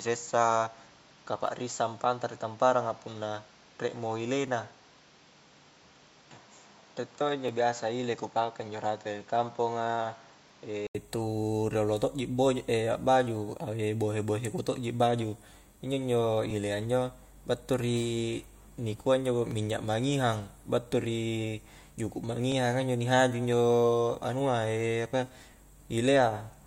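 From the start to 10.95 s the recording likely ran through an input switched to a poorer device. The speech is dull, with nothing above 7.4 kHz, about 5 dB quieter, over a noise floor about 30 dB down. At 10.95 s an 80 ms silence precedes fuller sound.

Overlapping chunks also occur: the audio was handled in 3 s blocks, each starting 7.07 ms before the previous ended, so that sliver plays twice. Short clicking stutters occur at 1.47, 7.48, 10.49, 13.50, 16.51, 19.51 and 22.52 s.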